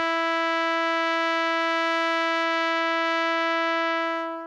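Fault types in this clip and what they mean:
No technical faults can be heard in the music; the signal stays continuous throughout, without interruption, distortion or added noise.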